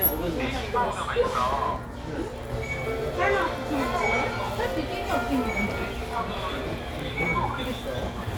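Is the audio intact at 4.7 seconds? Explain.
No. A ground loop or nearby transformer is leaking the 60 Hz power line into the signal, and this mains hum runs through the whole clip, including 4.7 s. It adds a steady low drone with some low harmonics, sitting only moderately below the sound itself.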